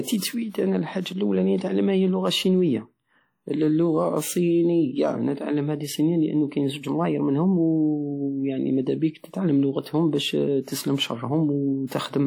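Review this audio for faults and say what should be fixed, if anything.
Throughout the speech there is a ringing, washy quality with a hiss that swells and fades with the signal, and nothing is present above 19.9 kHz. This is likely WMA compression. A transform codec at a low bitrate, which fits something near 48 kbps, spreads quantisation noise over long blocks and drops faint spectral detail. Unlike broadband background hiss, this noise tracks the signal and vanishes in pauses. Encode from the original at a higher bitrate or use a lossless format.

Pre-echo appears twice. A short hiss smears ahead of a sharp attack at 10.62 s, spreading about 56 ms, and again at 11.87 s, spreading about 44 ms. When an onset lands late in a long transform block, the block's noise, sized for the loud attack, also fills the quiet stretch before it. This is distinct from reverb or echo, which trail after a sound rather than leading it. 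Use an encoder with block switching or a higher bitrate.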